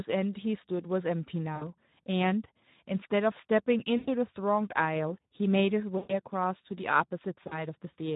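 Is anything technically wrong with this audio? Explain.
Yes. The whole clip carries Speex codec damage, plainly audible. At about 11 kbps this CELP coder has little room for the excitation, so the speech sounds hoarse and grainy, with a noisy texture. Unlike MP3-style swirling, the roughness sits in the voicing itself, not in smeared high frequencies.

There is also VoIP packet loss concealed by the speech codec at 1.55–1.66 s, 3.97–4.09 s, 5.97–6.14 s and 7.47–7.67 s. The decoder kept extrapolating its last pitch and filter for roughly 60, 100, 120 and 40 ms of missing audio, fitting runs of 20 ms frames. Each gap becomes a fading buzzy tone or coloured noise rather than a silent dropout or click, and the voice stays weak briefly after recovery.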